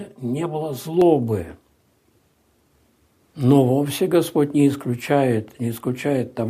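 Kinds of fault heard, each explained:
Channel delay (comb filtering): one channel arrives roughly 5 ms behind the other, and when the two are summed to mono the shared content cancels at evenly spaced frequencies starting near 100 Hz, leaving a hollow, phasey colour with fixed notches over the first second, 0 to 1.02 s.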